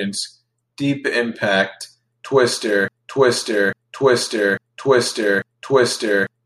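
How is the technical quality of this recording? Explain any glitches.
The recording has one serious fault: from 2.88 s to the end, the speech turns into a broken-record loop. A fragment of about 0.85 s repeats four times back to back, likely because the player or stream stalled and kept resending its last buffer, so the speech due there is lost. Unlike an echo, each repeat is identical and undiminished, with no overlap or decay.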